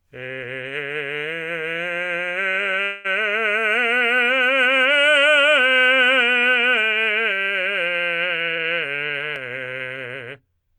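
At 2.83 s the music stalls for about 0.21 s. A continuation of the last sound fills the gap and fades. This is a call audio freeze, likely from delayed packets draining the jitter buffer. The music then resumes where it stopped, with nothing lost.

From 8.52 to 10.27 s a jitter buffer speed-up follows. The receiver trims short pitch-period pieces over and over to shrink its backlog. About a fifth of a second goes. The music runs at 112% speed, pitch unchanged, and the tempo hurries.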